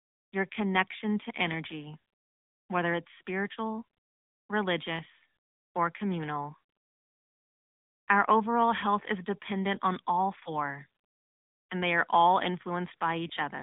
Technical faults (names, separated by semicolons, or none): AMR narrowband mobile codec; lost AMR speech frames